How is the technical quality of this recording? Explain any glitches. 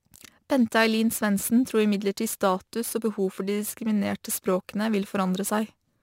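The recording has one technical fault, crude rate conversion, present for the whole duration. The speech was resampled by simply repeating the nearest samples, with no filtering. The pattern of duplicated samples fits a change from 44.1 kHz to 48 kHz. The resulting error sits roughly 20 dB below the signal and comes through as a gritty, inharmonic fizz that tracks the louder and brighter parts of the speech.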